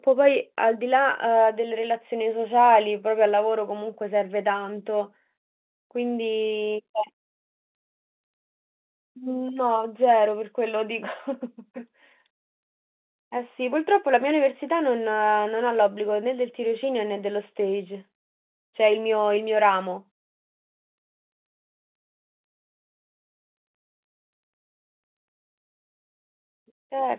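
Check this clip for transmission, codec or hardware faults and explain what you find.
No faults are present in the speech, which carries the 4 kHz band limit and the faint level-following quantisation hiss expected of ordinary mu-law G.711 telephone coding at 8,000 samples a second.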